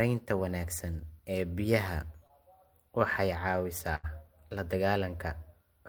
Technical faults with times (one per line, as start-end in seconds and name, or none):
2.27-2.31 short concealed packet loss
3.95-4.05 burst of packet loss